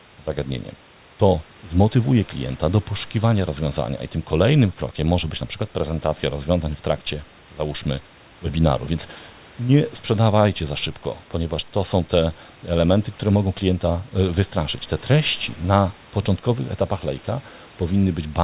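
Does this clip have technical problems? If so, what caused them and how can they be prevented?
No, no technical faults here.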